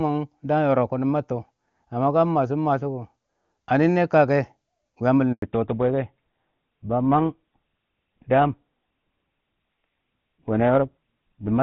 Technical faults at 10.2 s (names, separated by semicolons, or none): fallback to narrowband